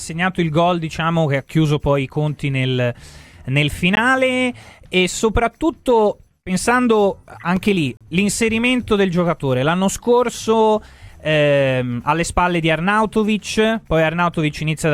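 At 3.95 s the sound drops out for about 17 ms, then resumes. At 7.97 s it happens again, this time for 36 ms, ending at 8.01 s. Both are a gap between stream segments. The gaps fall near 4-second intervals, which fits audio delivered in 4-second segments. Their time stamps leave a small space, and the player fills it with silence. Each hole has hard edges. Nothing is missing afterward, so the sound simply arrives slightly late.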